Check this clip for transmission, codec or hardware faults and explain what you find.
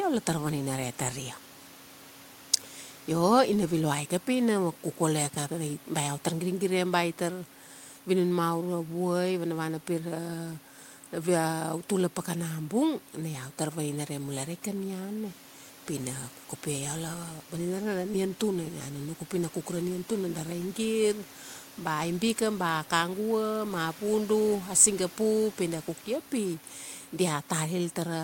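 No faults found.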